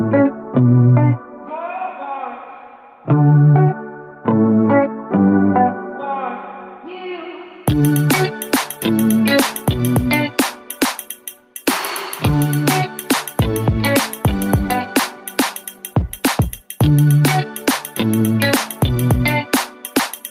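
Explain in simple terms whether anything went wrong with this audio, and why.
Yes, there's gain pumping throughout: loud and soft parts end up closer in level and the sound is squashed, likely from gain set too high and an automatic limiter, unlike a steady volume drop.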